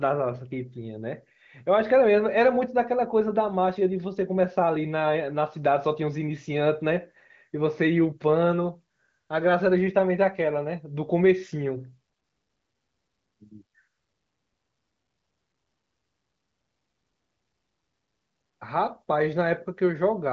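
The speech comes through with no technical faults, carried by the AMR wideband (HD Voice) codec at its 23.05 kbit/s mode, with content ending near 7.4 kHz.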